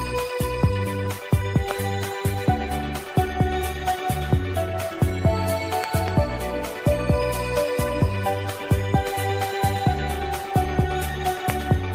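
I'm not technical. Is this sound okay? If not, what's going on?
No, there are a few loud pops: a sharp one at 1.71 s, a quick double pop between 5.84 and 6.10 s, and another at 11.50 s. They're likely from a sudden electrical jolt, like a plug, switch or static, while the sound keeps going underneath.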